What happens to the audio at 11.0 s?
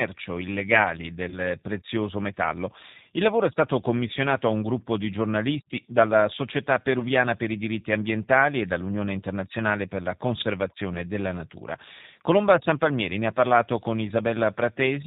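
Just before that point, from about 10.94 to 10.96 s, right before "della natura", there's a short dropout from VoIP packet loss concealed by the speech codec. The gap sounds like it fits a single lost 10 ms frame, so the decoder filled it by extending its last pitch and filter settings at falling gain. You hear a brief buzzy or noisy smear that fades, and the speech comes back weak for a moment because each frame builds on the previous one.

Underneath all of this is the G.729 codec at 8 kbit/s, and its damage is plainly audible. It rebuilds speech from a vocal tract model, a pitch predictor and a handful of pulses per half-frame, and it passes nothing above 4 kHz. That gives the speech a dull, slightly rough, synthetic edge around this moment.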